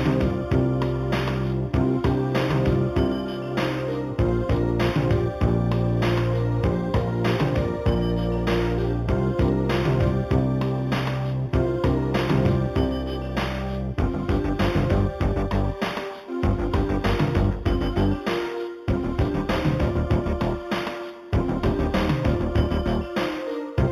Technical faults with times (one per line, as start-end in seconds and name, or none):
0.00-23.92 imaging from linear upsampling